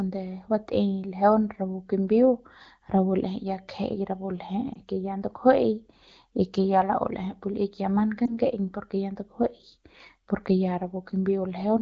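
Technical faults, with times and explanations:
4.74–4.78 s and 8.25–8.38 s, lost AMR speech frames: The speech briefly dips and warbles twice. Each time the decoder repeats the last good pitch and vocal tract settings at falling gain, which fits a single lost 20 ms frame. The wideband codec's fade sounds quick and short.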